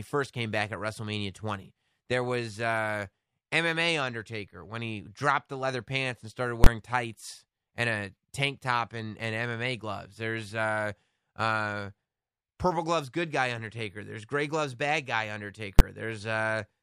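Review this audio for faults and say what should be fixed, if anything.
Invalid numbers at full scale at 6.64–6.66 s, between "leather pants and started" and "tights and a tank", and at 15.79 s. Invalid values were pinned to full scale for one block each, fitting 1024- and 512-sample blocks, so each is heard as a loud bang. To prevent it, check each processing stage for infinite or invalid results and replace them with silence before output.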